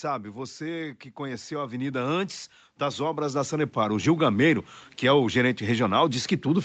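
Automatic gain falling, from 0.05 to 0.81 s: the automatic gain control, judging its input too hot or its background noise too strong, pulls its gain down by about 4 dB across those three quarters of a second. The level drop is a slow slide rather than a step, so the speech and the background underneath it sink together. That shared fade is what marks it as gain riding, not a change in how loudly anyone is speaking.

Automatic gain rising, from 1.15 to 4.15 s: the control now moves the other way. Hearing the input as too quiet, it raises its gain gradually by about 13 dB over three full seconds. The speech swells steadily louder, and the background noise rises right along with it, so the gain is plainly moving rather than the talker. This all sits within the call's normal band limit, with nothing above 8 kHz.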